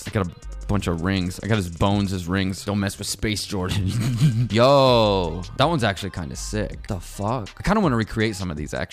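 From 0 to 4.95 s, Wi-Fi interference: a nearby radio's rectified beacon ticks faintly every 102.4 ms, showing as evenly spaced vertical spectrogram lines.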